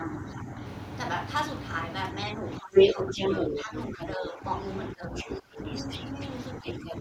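Speech suppressed in double talk dips the talker at 0.0–0.6, 2.36–4.45, 4.93–5.61 and 6.59–7.0 s, by about 5 to 25 dB, deepest near 5 s, likely because the echo canceller attenuated everything while both sides spoke. The other side's voice leaking through is heard at 2.75–3.64 s (about 15 dB above the speech), 4.0–4.05, 5.16–6.28 and 6.65–6.93 s. This is likely loudspeaker playback that the canceller did not fully remove from the microphone.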